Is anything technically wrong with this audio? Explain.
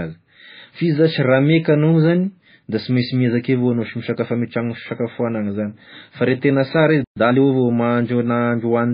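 Yes. Throughout the speech there is heavy MP3 compression damage, likely from encoding at a very low bitrate, around 17 kbps. Nothing survives above 5 kHz, so the top is sliced off at a fixed cutoff, and with bits this scarce the encoder discards weaker frequency lines that then flicker in and out between frames. The result is a watery, swirling texture, with s sounds turned metallic and chirpy and consonant attacks smeared.

A playback stall runs from 7.04 to 7.17 s, likely from the player running dry of data or its thread being held up. The output drops to silence for about 120 ms in the middle of the speech before picking up again, a gap long enough to register as a clear break in the flow rather than a natural pause.

Time-compressed catch-up follows from 7.17 to 7.41 s. Having fallen behind, the player trims its backlog by removing short fragments and cross-fading across the joins, running at 1.5 times normal speed. 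The pitch stays where it was, but the speech sounds hurried and clipped for that quarter second before settling back to its proper pace.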